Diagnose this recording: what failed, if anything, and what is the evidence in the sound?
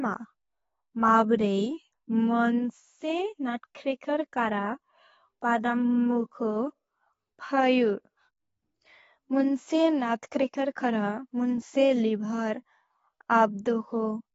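The speech is dull and warbly throughout, empty above 7.6 kHz: likely AAC compression, a codec starved near 24 kbps, lowering the cut-off and coarsely quantising bands.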